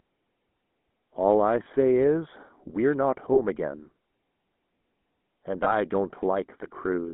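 Speech, carried through the GSM full-rate codec. The sound is buzzy and gravelly, and the band stops near 3.4 kHz, which fits a 13 kbps GSM stream. Channel delay (comb filtering) also makes it hollow and dull. One channel lags by a fraction of a millisecond, and the mono sum cuts a notch around 3 kHz. Lost GSM frames appear at 1.64 to 1.67 s, 3.34 to 3.40 s and 5.64 to 5.73 s. Each one leaves a brief metallic ring where the last good frame is repeated.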